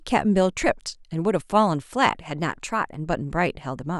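From 2.40 to 3.08 s, the speech runs about 5.2% fast and rises about 88 cents, just under a semitone. Then it snaps back to normal. This is likely a drift correction step, where clock-matching software briefly changed the playback rate to rebalance its buffer.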